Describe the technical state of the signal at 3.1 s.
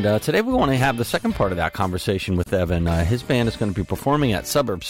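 At 3.1 s the signal is intact, with no dropout, distortion, glitch or other fault audible at that moment.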